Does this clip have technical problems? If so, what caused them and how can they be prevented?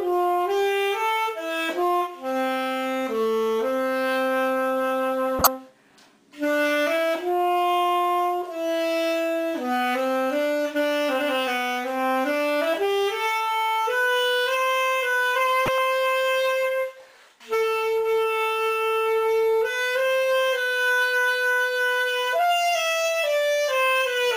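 Yes, there are two short bursts from a corrupt frame decoded, at 5.39–5.47 s and 15.66–15.78 s. Flipped bits in a handful of compressed frames got played anyway, so misread gains splash fairly loud energy at wrong frequencies as chirpy noise. Error detection with concealment or retransmission prevents this.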